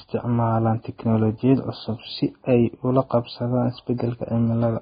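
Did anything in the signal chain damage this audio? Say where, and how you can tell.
Yes, at the codec stage: the speech was likely squeezed through heavy Vorbis compression, fitting a bitrate near 15 kbps. Nothing survives above 4.9 kHz for the whole clip, and the remaining treble is coarsely quantised into grainy hiss, roughening vowels and smearing consonant onsets.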